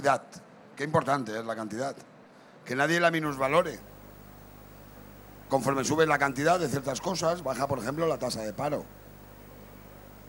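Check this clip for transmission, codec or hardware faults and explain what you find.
One hardware fault is present: video or display buzz. It starts at 3.26 s and runs to the end. A screen or video cable is coupling its signal into the audio path. The picture refreshes 50 times a second, so a 50 Hz buzz appears, with harsh hash above it. A thin, very high whine at 15.6 kHz also comes through from the line scanning. The buzz sits roughly 25 dB below the sound.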